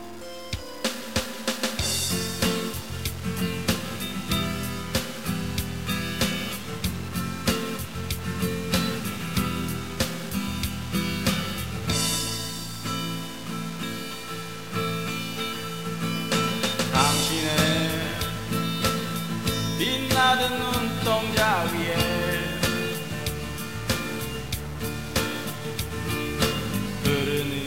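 From start to finish the audio carries a harsh, buzzy distortion. The quiet gaps are not silent either. They fill with a steady rasping noise. The likely cause is a stuck bit, one data bit held at a fixed value by a broken line or converter. Roughly half the samples are then wrong by that bit's weight, a step of about -35 dBFS. That is loud enough to roughen every passage and keep the pauses noisy.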